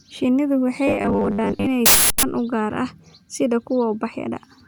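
From 0.87 to 1.66 s the speech turns into a rigid metallic buzz at 100 Hz: robotic sound from repeated short buffers. Likely cause: audio arriving too seldom, so a 10 ms slice repeats while roughly half the real signal is skipped. Unlike plain dropouts, the gaps are filled with a fixed pitch that still loosely tracks the speech.

At 1.86 s an uninitialised buffer plays: a loud burst of digital noise lasting 0.37 s, which fits a 16384-sample block played out before any audio was written to it. Unlike a click or dropout, it is a sustained, sharp-edged block of junk samples unrelated to the speech around it.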